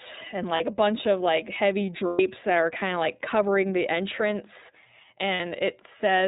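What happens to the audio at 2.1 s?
Between 2.07 and 2.20 s, just after "bunch of like heavy" and before "that are kind of", there are lost iLBC frames. The gap lasts about 120 ms, which fits four 30 ms frames. The decoder fills it by repeating the last pitch cycle mixed with noise, so it comes out as a held, slightly buzzy, breathy vowel. On a spectrogram, the harmonics there run flat and unchanging, smeared with noise. On the waveform, the same cycle repeats at a steady or fading level. Because iLBC frames stand alone, the speech is right again almost at once at 2.20 s.

Throughout, including this moment, the clip carries the iLBC codec at 13.33 kbps with 30 ms frames. This narrowband coder codes each frame's excitation independently and passes nothing above 4 kHz, so the speech sounds plainly rough and somewhat synthetic. A spectrogram shows a hard ceiling at 4 kHz with empty space above it.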